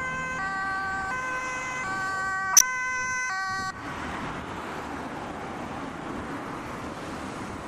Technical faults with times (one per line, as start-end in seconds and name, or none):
2.53-2.62 corrupt frame decoded